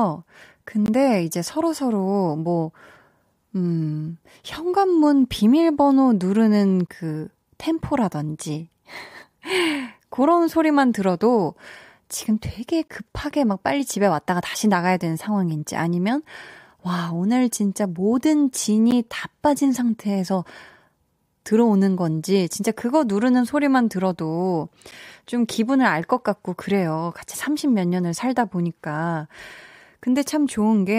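Short hard-edged dropouts of about 9 to 19 ms hit at 0.86, 6.87, 12.88, 18.91 and 24.91 s. That's a gap between stream segments every 6 s, padded with silence rather than losing audio.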